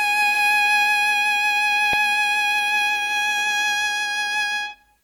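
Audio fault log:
throughout: WMA compression, likely the cause of the ringing, washy character heard across the music. Quantisation noise from a transform codec with long blocks smears over tens of milliseconds, so attacks blur and a hiss rises and falls with the signal, with weaker detail thinned out. The damage is plainly audible, fitting a low rate of around 48 kbps, yet content still reaches about 20.1 kHz. Unlike steady broadband noise, this hiss follows the music and stops when it does.
1.93 s: underrun with held sample. The output buffer ran dry for about 0.73 ms, a gap that fits 32 samples, and the converter held its last value instead of dropping to zero, leaving a short flat stretch in the waveform. Essentially no audio was lost, because playback resumed where it left off, so the event is at most a faint tick rather than a sharp click. Unlike a dropout to silence, the level freezes instead of falling away, and nothing of the music goes missing.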